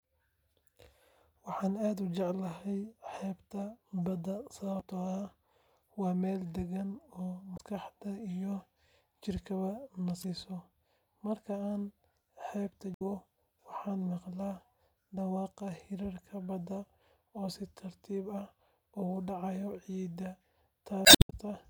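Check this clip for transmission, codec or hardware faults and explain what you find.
The speech shows damaged data in a compressed stream at five points: 4.77–4.82 s, 7.54–7.61 s, 10.20–10.25 s, 12.94–13.02 s and 21.02–21.33 s. Corrupted frames throw the decoder out of sync. Each spot is a brief chirp, squawk, click or short hole.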